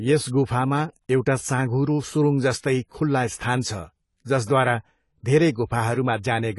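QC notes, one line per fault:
Throughout, AAC compression: nothing reaches above 11.4 kHz, and the speech sounds dull and smeared, with a plainly audible warbling, fizzy texture on sibilants and sustained sounds. This likely comes from AAC-LC quantising coarsely and dropping bands, which fits a bitrate near 32 kbps.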